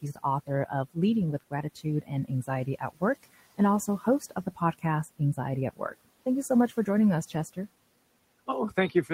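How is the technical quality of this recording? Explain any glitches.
The recording has three short stretches of speech cut by the noise suppressor, at 2.02–2.31 s, 2.66–3.02 s and 3.87–4.84 s. The suppressor mistook quiet parts of the speech for noise and pulled them down by about 14, 18 and 14 dB. Soft consonants and endings sound swallowed, together spanning only a few tenths of a second. Unlike a network dropout, the sound fades rather than vanishing abruptly, and the room noise, about 23 dB below the speech, dips with it.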